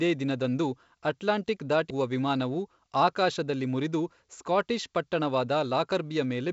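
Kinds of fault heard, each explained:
CD skip: The laser lost its track and landed on another turn of the disc's spiral, so playback muted very briefly and resumed from a different point. At 1.90 s, after "ದಿನದಂದು ಅಟ್ಲಾಂಟಿಕ್", a cut of a few milliseconds breaks the speech before "ವಿಮಾನವು ಆಕಾಶದಲ್ಲಿ ಮುರಿದು ಸ್ಕಾಟಿಷ್".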